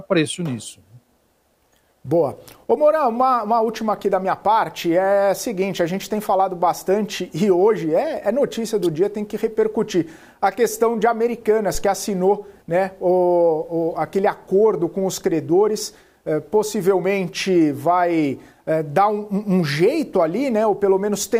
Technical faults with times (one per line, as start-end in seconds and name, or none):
11.75-11.85 phantom power thump